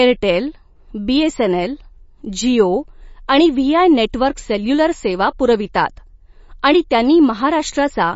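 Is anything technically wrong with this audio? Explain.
Yes, there is MP3 compression throughout, heard as watery, swirly speech with nothing above 7.5 kHz. A spectrogram shows a hard ceiling there with flickering holes below. The cause is likely a starved encoder, which fits a bitrate near 32 kbps dropping weak frequency lines frame by frame.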